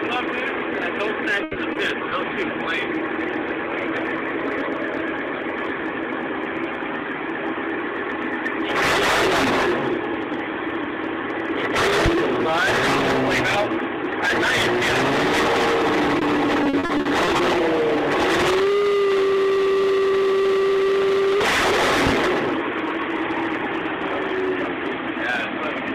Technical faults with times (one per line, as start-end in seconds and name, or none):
1.43-2.13 repeated packet loss (robotic sound)
12.06-12.10 loud pop
16.19-16.23 short concealed packet loss
16.63-17.41 repeated packet loss (robotic sound)
22.07-22.11 loud pop